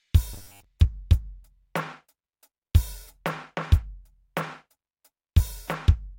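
From 0.33 to 0.64 s the music collapses into a stiff, metallic buzz pitched at 100 Hz. That's robotic sound from repeated short buffers. New audio likely wasn't arriving fast enough, so the playback kept looping the last chunk of around 10 ms to cover the gap, and most of the real material in that stretch got skipped. The loop rate fixes the buzz at 100 Hz, and the original music only loosely comes through underneath.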